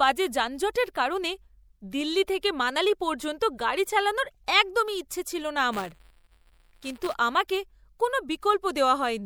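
Speech with buffer tearing from 5.72 to 7.14 s, after "একদম ইচ্ছে ছিল না": a steady 172 Hz rattle, consistent with a 256-sample buffer, splices in audio about 10 ms stale and follows the signal, unlike a constant hum.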